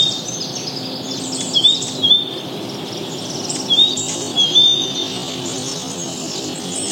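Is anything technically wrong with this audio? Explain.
Yes. From 3.92 s to the end, there is a time-stretched section: the audio abruptly slows to half speed while its pitch stays the same. This is likely software stretching the passage to fill a length, repeating short pieces to hold pitch, so the sound drags.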